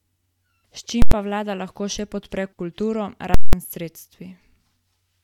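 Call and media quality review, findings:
Invalid numbers at full scale, 1.02–1.12 s before "pa vlada" and 3.34–3.53 s after "še podpre kulturo": loud pop, silence, pop over about 93 ms and 186 ms, fitting 4096- and 8192-sample DSP blocks. Unlike clipping, the signal is pinned flat, not distorted.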